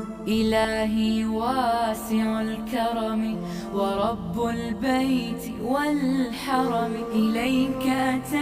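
From 0.65 s to the end, the sound has channel delay (comb filtering): one channel arrives about 20 ms late, and summing to mono cancels shared content at evenly spaced frequencies, starting at around 20 Hz. The result sounds rough and slightly doubled. Unlike a flanger, the notches stay fixed rather than sweeping, and unlike a distinct echo, no separate repeat can be picked out.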